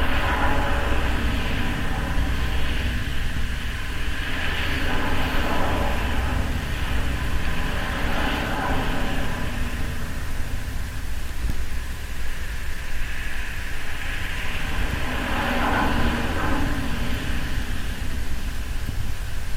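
Sounds make up the recording, and nothing in the signal points to a technical fault at any point.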